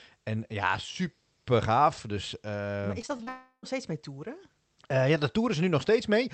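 Repeated packet loss (robotic sound) runs from 3.01 to 3.29 s. Four holes open in quick succession, the longest 36 ms, and each is patched by stretching the preceding audio forward before the next loss arrives. Together the patches cover about a third of that span. The speech turns choppy and machine-like, with short pieces dropping out. The Opus call path around it limits the audio band to 8 kHz.

From 3.29 to 3.65 s the audio is replaced outright. For about 340 ms the sound is a continuation of the last fragment, a synthetic tail that decays, and around 90 ms of it is silence. The speech then resumes on "steeds mee toeren ja", with the intervening stretch missing. The pattern points to a long network dropout as the likely cause, where nothing reached the receiver for about a third of a second.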